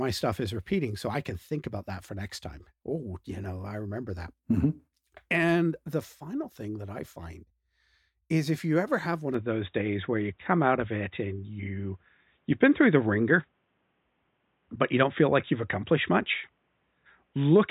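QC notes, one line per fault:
9.34 s to end, input switched to a poorer device: with no gap, the speech turns dull and boxy, losing everything above 3.8 kHz, shifting in level by roughly 5 dB and gaining a faint new noise floor, likely because capture moved to a narrower-band microphone or headset.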